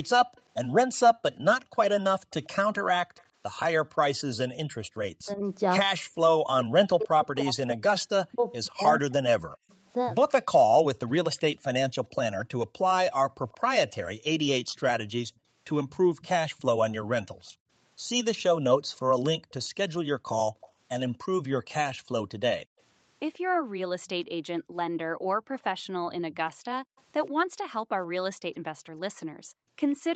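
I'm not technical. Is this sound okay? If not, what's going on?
No. In two stretches, from 0.03 to 3.59 seconds and again from 13.49 to 27.01 seconds, a faint second copy of the speech trails about 0.13 seconds behind, like a quiet repeat. That is an echo leak. It is most likely the other person's loudspeaker sound being picked up by their microphone and not fully removed by their echo canceller, so the speech travels back down the line a moment later. It is a little louder in the later stretch.

Between 5.09 and 9.65 seconds, the speech keeps sinking away, sometimes almost to nothing, for about three seconds in total, and it comes and goes in pieces. This is speech suppressed in double talk. When both sides talk at once, the echo canceller likely cannot tell the local talker apart from the loudspeaker's echo, so it turns everything down together and swallows parts of the speech.

From 13.29 seconds to the end of the clip, the quiet room sound between phrases dips or drops away sharply and then returns. 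This is background gated by the echo canceller. While the loudspeaker is playing, the canceller clamps the microphone down hard to keep the echo out. The room sound returns only when it lets go.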